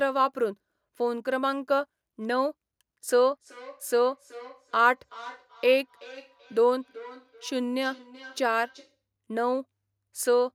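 From 3.41 s to 8.99 s, feedback echo between two devices appears: a second device on the call plays the signal back into this microphone, and neither echo canceller removes it. The speech returns at a fixed interval of roughly 0.4 s, peaking about 21 dB below the speech.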